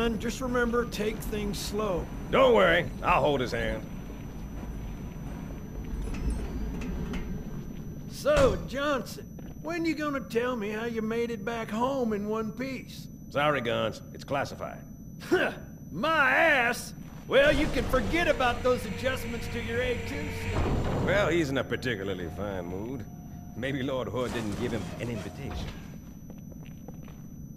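A switching supply whistle runs throughout the audio, a thin, high tone sitting about 35 dB below the programme and wandering slightly between roughly 5.9 and 6.0 kHz. The tone comes from a switch-mode power supply whose regulator has dropped into a pulsed, audible burst mode or is beating against a neighbouring supply. Its small pitch drift follows shifts in the load it is feeding.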